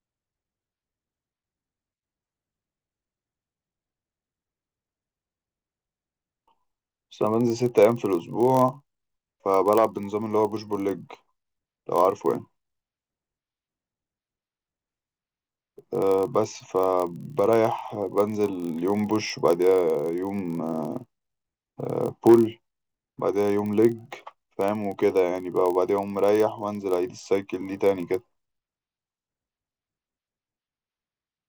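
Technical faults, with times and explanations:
throughout: block size mismatch (padded). Short blocks, fitting 1024-sample reads, get zero-filled, leaving gaps that buzz at 43.1 Hz and slow speech to 0.999 times speed, timbre unchanged.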